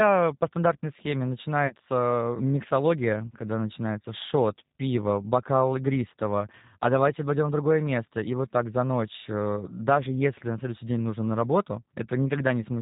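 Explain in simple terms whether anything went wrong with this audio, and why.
G.729 codec, throughout the whole recording: the speech was squeezed through a low-rate phone codec that rebuilds the voice from a simple model of the throat and mouth. Everything above 4 kHz is gone, so the voice sounds muffled, slightly rough and a little synthetic.

VoIP packet loss concealed by the speech codec, from 1.67 to 1.74 s: about 30 ms of audio never arrived, so the decoder guessed by stretching the last sound it had and fading it out. That leaves a brief buzzy or noisy smear, and the voice stays weak or distorted just afterwards.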